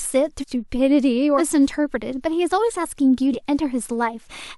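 Joins at 0.40 s, 1.37 s and 3.32 s mark spots where the speech jumps ahead by roughly a fifth of a second, a little less at the last. These are compressed frames skipped: several 46.4 ms frames went undecoded.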